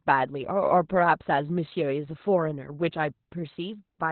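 Throughout, Opus voice compression in narrowband SILK mode, which fits a very low bitrate near 8 kbps, strips everything above 4.2 kHz, leaving the speech muffled, hoarse and slightly robotic.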